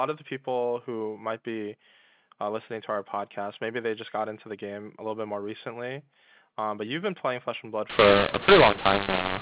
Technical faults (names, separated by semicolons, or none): mu-law and A-law mixed up